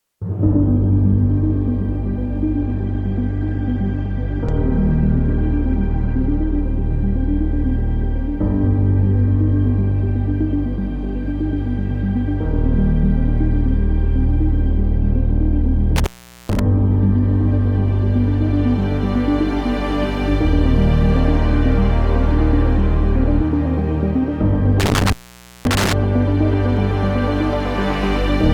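At 2.59 s the sound drops to an adaptive stream at a lower bitrate. The change is abrupt, with no gap. Treble vanishes above about 8.2 kHz. What remains sounds thin and smeared. This fits a stream that stepped down from around 64 kbit/s Opus to around 16 kbit/s when the connection slowed. At 6.59 s full quality returns just as suddenly.

From 15.96 s to 16.59 s there is an intermittent contact. A loose plug or cable opens the line for about 430 ms. Crackle marks both edges, and faint hiss fills the gap. The same fault returns from 24.80 s to 25.93 s. This time the line stays open for about 529 ms, again with crackle at each edge and hiss between.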